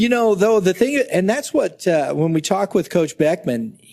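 No technical faults can be heard anywhere in this clip. There is nothing to report at any point in the audio.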